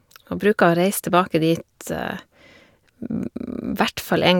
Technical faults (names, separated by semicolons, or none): none